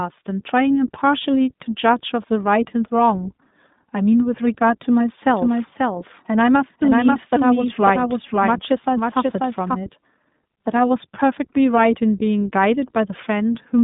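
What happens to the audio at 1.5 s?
At 1.5 s the speech carries iLBC codec damage that runs through the whole clip: each 20 ms frame is coded on its own, giving a plainly rough, synthetic grain that fits a 15.2 kbps mode, with nothing above 3.8 kHz. That frame-by-frame roughness sets it apart from plain band-limiting.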